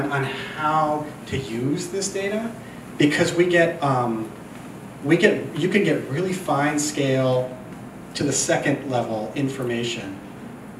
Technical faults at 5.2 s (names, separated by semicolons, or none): none